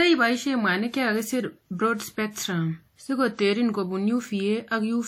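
Throughout the speech there is a ringing, washy quality, with a hiss that swells and fades with the signal and nothing above 17.1 kHz. The cause is likely WMA compression, whose clearly audible damage fits a low bitrate around 48 kbps.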